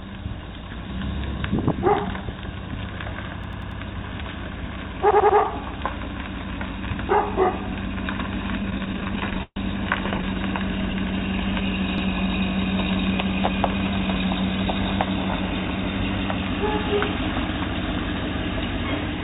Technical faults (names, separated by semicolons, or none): repeated buffer; repeated stalls (stutter)